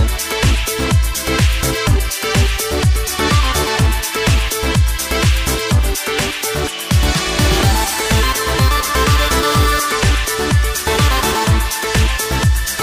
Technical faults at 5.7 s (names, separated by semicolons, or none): none